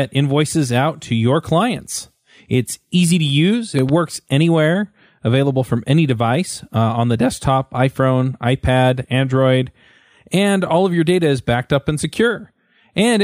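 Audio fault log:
3.79 to 3.91 s, loud pop: right after "easy to use" and before "anywhere available from any", two sharp pops arrive in quick succession, peaking about 5 dB above the speech, which carries on underneath. The likely cause is a sudden voltage pulse, such as from a plug, switch or static discharge, entering the signal path. On the waveform these show as two tall, narrow spikes. On a spectrogram they appear as two thin vertical broadband stripes across the speech.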